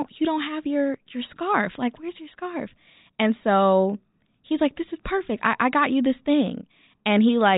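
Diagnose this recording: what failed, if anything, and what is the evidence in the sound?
Nothing stood out on listening to the speech in this recording, so there is no failure here to trace to any stage of the chain.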